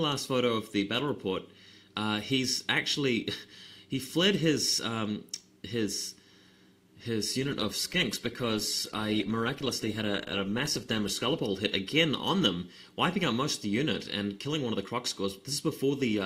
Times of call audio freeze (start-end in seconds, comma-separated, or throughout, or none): none